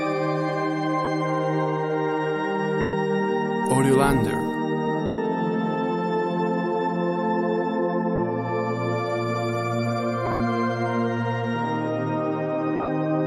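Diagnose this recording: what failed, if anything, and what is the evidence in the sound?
Short noisy smears replace the sound at 1.05–1.07, 8.16–8.18, 2.81–2.93, 5.06–5.18, with broken patches at 10.26–10.40 and 12.76–12.88. These are lost LE Audio frames on the Bluetooth link: the LC3 decoder conceals gaps by reusing the last spectrum with random signs, fading it over longer losses.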